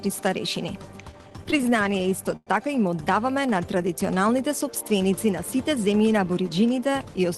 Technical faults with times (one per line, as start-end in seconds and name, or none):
1.11-2.49 repeated stalls (stutter)
5.28-5.93 jitter buffer speed-up